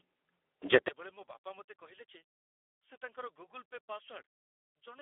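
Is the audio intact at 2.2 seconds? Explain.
No. At 2.2 seconds the speech carries two faults at once.

The first is Speex codec damage, present through the whole clip. At about 8 kbps the codec has very few bits to describe each sound, so the speech comes out hoarse, grainy and edging toward robotic. The band runs only from roughly 300 Hz to 3.4 kHz, with nothing above 3.6 kHz. That band limit on its own would just sound like a clean telephone line. The buzzy, noisy texture layered on top of it is what marks this as codec coding damage.

The second is a sharp collapse in level that begins at 0.88 s and lasts to the end. The speech drops by about 33 dB and what remains is faint. The likely cause is one channel inverted: with one stereo channel's polarity reversed, the centred speech cancels when the two channels are summed to mono, and only their small difference survives. This is not a dropout or mute, because a weak residue stays audible and nothing cuts in and out. 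It is also not a simple volume drop, because what is left is only the small mismatch between the channels rather than the same sound just turned down.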